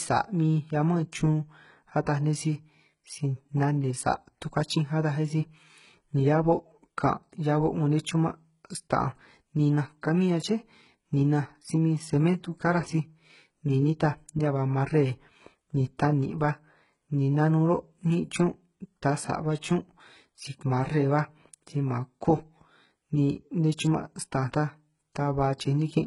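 Throughout the speech, the treble has a synthetic, gritty sheen, with s sounds coming out lispy and metallic. This is likely HE-AAC compression at heavy damage, consistent with a very low bitrate near 12 kbps. Only the lower band is truly coded, and the upper band is patched in by copying lower harmonics upward, so they fail to align. On a spectrogram, the upper band looks like a blurred, repeated copy of the region below, and nothing appears above 11.1 kHz.

At 19.61 s, pre-echo softens an attack: a short hiss leads it by about 17 ms. The codec spread quantisation noise across the whole transform block, including the quiet stretch before the onset. On a waveform, a thin noise smear sits just ahead of the sharp rise. On a spectrogram, it shows as a broadband haze preceding the transient.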